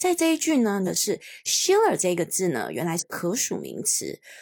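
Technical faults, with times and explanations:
0.83–0.88 s and 2.97–3.03 s: damaged data in a compressed stream. Corrupted frames are misread while the decoder loses sync and hunts for the next header, giving brief glitches of about 44 and 62 ms, seen as broadband smears or abrupt waveform discontinuities.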